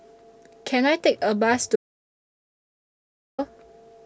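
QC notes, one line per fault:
1.76–3.39 s: audio dropout to silence. Speech cuts to dead silence for about 1.6 s, likely a lost input link; waveform flatlines, spectrogram goes blank.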